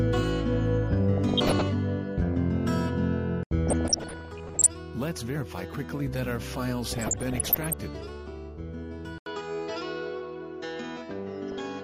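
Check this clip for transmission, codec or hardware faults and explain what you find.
Three kinds of fault are present: low-rate MP2 coding throughout, four bursts of DAB burbling, and a late change of input device.

MP2 compression, throughout: too few bits leave upper sub-bands switched off and the rest coarsely quantised, likely at around 80 kbps, giving dull, gurgling, granular sound.

DAB burbling at 1.17–1.66 s, 3.67–4.67 s, 6.89–7.73 s and 11.51–11.60 s: bit errors of roughly 0.7 to 1.5 percent slip past error correction, putting short blips of noise into single sub-bands and making sub-bands jump in level for up to a frame.

Input switched to a poorer device at 9.18 s, lasting to the end: the sound drops out for 80 ms. It then returns with nothing above 7.6 kHz, a level shift of about 5 dB and new background noise about 55 dB down. This likely reflects the narrower, boxier character of the new device.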